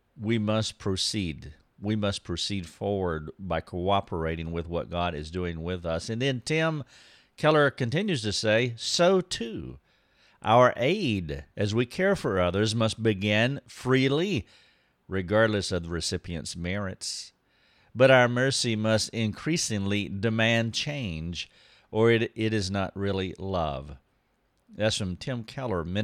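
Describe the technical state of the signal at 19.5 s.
At 19.5 s the speech signal is intact, with no fault present at that moment.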